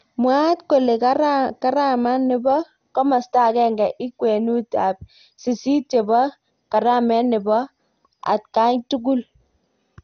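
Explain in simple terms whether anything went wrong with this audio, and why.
The speech was squeezed too hard by a coder, most likely MP2 compression, the older Layer II format used for low-rate digital radio, throughout the clip. It splits the sound into narrow frequency bands and gives each a share of data. With too little to go round, the top bands are simply switched off, so nothing remains above about 6.5 kHz. The remaining bands are stored roughly, which leaves the speech dull, gurgly and grainy from start to finish.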